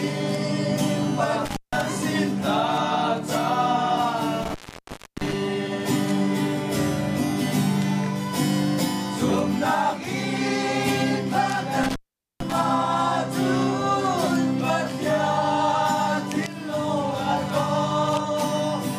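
The audio suffers from intermittent contact at 1.45, 4.43 and 11.84 s. A loose connection opens, dropping the sound for 161, 673 and 447 ms, with crackle at each edge.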